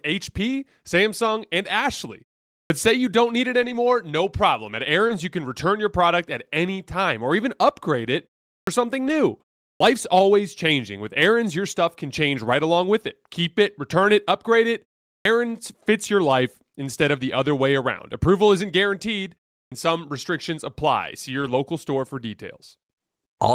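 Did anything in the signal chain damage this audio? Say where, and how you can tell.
Yes. Two stages left marks: the playback device and the network path feeding the codec.

Clipped start after a pause, at 2.66, 8.63, 9.76, 15.21 and 19.67 s. Each time, sound resumes after a gap of roughly 0.4 to 0.5 s, and its first 40 to 46 ms are missing, so the onset begins abruptly with no lead-in. This is the playback stage. The output device drops into a low-power state during silence and needs about 40 ms to wake before it passes audio again.

Lost packet rebuilt from error correction, at 3.61–3.75 s (80 ms), 5.09–5.11 s (20 ms), 9.07–9.13 s (40 ms), 14.03 s (20 ms) and 21.41–21.51 s (60 ms). There is no gap at any of these points. Instead, brief rough, noisy stretches appear, with lengths in multiples of 20 ms that fit whole Opus packets. Packets were lost on the network, and the decoder played the low-bitrate copies that the following packets carried.

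Short concealed packet loss, at 5.07–5.11 s. About 20 ms never arrived. The receiver filled the hole by extending the preceding sound and then blending back, which leaves a short smear. This overlaps the error-correction repair at 5.09 s, so that moment had two kinds of patching stacked together.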